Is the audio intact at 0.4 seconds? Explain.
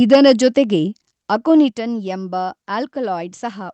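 No. From 0.12 to 0.47 s the peaks are flattened by what is likely microphone overload, driven about 6 dB past full scale, with a few percent of samples clipped. Unlike codec artefacts, the harsh crackle tracks only the loudest syllables.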